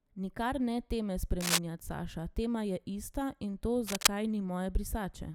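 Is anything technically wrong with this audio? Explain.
Yes. Cable scratch noise cuts in twice, from 1.40 to 1.59 s, just after "ne teme", and from 3.87 to 4.07 s. Dense, uneven rustling sits over the speech, somewhat louder than it. This likely comes from a worn cable or connector shifting, its contact resistance fluctuating rapidly.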